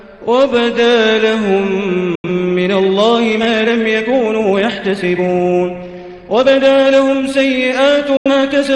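At 2.15 s the sound cuts out. It drops to silence within about 3 ms and stays silent until 2.29 s. This is a digital broadcast dropout. The receiver lost the signal, or its frames failed their checks, so it muted the output. About 85 ms of audio is gone, which fits two lost frames. Nothing sent in that gap can be recovered.

From 2.54 s to the end, the pace jumps to about 1.63 times normal while the pitch holds steady. This is a time-stretched section. The sound is squeezed by dropping short pieces, so it comes across rushed. The likely cause is software shortening the audio to fit a set length.

A second digital broadcast dropout runs from 8.17 to 8.31 s. It has the same quick 3 ms fade to silence and the same loss of about 85 ms, again consistent with two failed frames.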